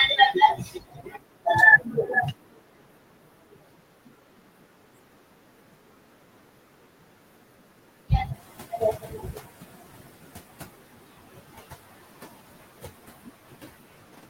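A speech recording with noise suppressor artifacts throughout. The background is pumped down between phrases and rises under them. Speech cut by the noise suppressor recurs. From 0.54 to 1.47 s, about a second of speech is swallowed, with drops of up to about 22 dB. From 1.78 to 2.15 s, the loss reaches about 15 dB. From 2.32 to 8.1 s, roughly five seconds are affected, up to about 22 dB. From 8.34 s to the end, drops again reach about 22 dB. Parts of the speech are mistaken for noise and sound swallowed. Room noise jumps by about 22 dB near 8.5 s. The noise suppressor is caught up from 8.33 to 9.82 s. Its noise estimate lags, so the new noise first passes with less reduction. It then sinks by about 17 dB over 1.49 s as the estimate adapts.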